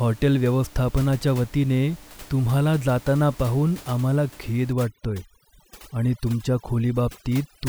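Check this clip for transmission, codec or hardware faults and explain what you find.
One fault turns up in the last part of the clip: overdone noise removal, running from 4.73 s to the end at 7.69 s. Before that point the room noise sits steadily about 23 dB below the speech. From 4.73 s, a noise reducer set far too aggressively pushes individual frequency bands down to nothing whenever they approach its noise estimate. Quieter speech components vanish along with the noise, so the background collapses to near silence dotted with twinkling specks. A low-bitrate codec also produces a swirly sound, but it wouldn't empty the gaps. A noise gate would drop the whole signal at once, not band by band.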